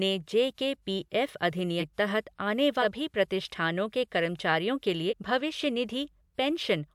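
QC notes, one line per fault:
1.79 to 5.14 s, compressed frames skipped: three jumps in the speech, at 1.79 to 1.83 s, 2.81 to 2.85 s and 5.09 to 5.14 s. Each time a chunk of whole frames never gets played, so the audio leaps ahead by roughly 200, 400 and 300 ms of material. The jumps fit frames of about 46 ms, with a handful missing each time.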